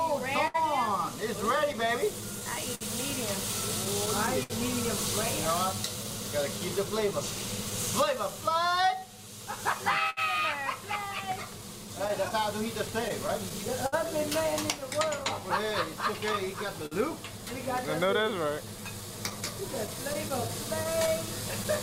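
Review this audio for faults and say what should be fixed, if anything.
Small hiccups and an unsteady pace run through the whole clip: clock drift between sender and receiver, with the sender's clock about 5% slow, so the receiver's buffer keeps draining.

From 2.21 s to the end, repeated timing corrections stretch the sound by repeating short pieces, playing at about 98% speed and adding roughly 0.4 s overall.

Brief ticks and smears come from scattered short gaps: about ten between 0.47 and 5.72 s and about thirty between 10.10 and 21.67 s, none longer than about 70 ms, each patched by continuing the last sound.

To prevent these, lock both ends to a common clock or resample adaptively, and make the network path more reliable or use a larger jitter buffer.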